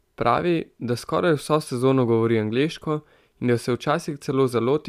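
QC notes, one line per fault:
No faults found in this speech recording.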